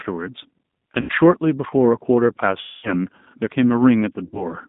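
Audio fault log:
throughout G.729 codec: The speech is confined to a line band of 150 Hz to 3.7 kHz and sounds plainly rough and synthetic, consistent with an 8 kbit/s G.729A stream. The decoder rebuilds each 10 ms frame from a vocal tract filter, a pitch predictor and a few sparse pulses. On a spectrogram, energy stops sharply at 3.7 kHz, and harmonics look smeared and grainy rather than cleanly striated.
1.01–1.12 s, 2.61–2.94 s, 4.25–4.50 s VoIP packet loss concealed by the speech codec: Audio drops out for 80 ms, 220 ms and 80 ms. The decoder fills each gap by extrapolating its last pitch and filter at falling gain, so the sound is stretched into a buzzy tone or coloured noise that fades. The longest gap would fit about eleven lost 20 ms packets. A spectrogram shows frozen, flat harmonic bands that dim, while the waveform shows a repetitive, decaying envelope that stays weak briefly after each gap.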